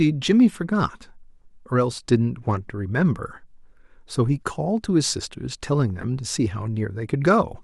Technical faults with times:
0.49-0.56 corrupt frame decoded
6.01-6.04 corrupt frame decoded

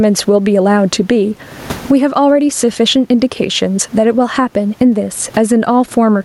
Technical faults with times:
0.00-6.24 gain pumping

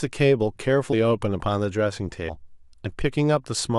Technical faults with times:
0.92 compressed frames skipped
2.28 compressed frames skipped

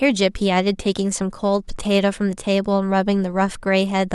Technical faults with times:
none

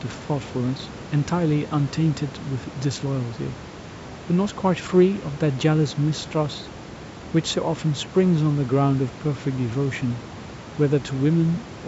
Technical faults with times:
none

